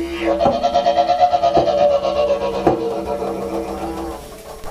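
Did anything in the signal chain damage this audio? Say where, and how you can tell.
No, nothing in the signal chain has left an audible mark on this audio. Listening across the whole clip, no stage from capture through to playback gives itself away in the sound.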